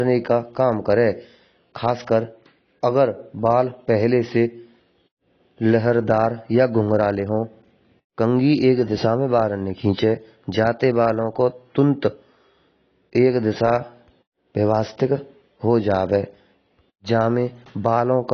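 Speech throughout, most likely squeezed through AAC compression (AAC-LC) at a low bitrate, consistent with roughly 28 kbps. The encoder discards everything above 6.6 kHz and coarsely quantises the rest, so the speech sounds plainly dull and smeared, with a warbling, fizzy edge on sibilants.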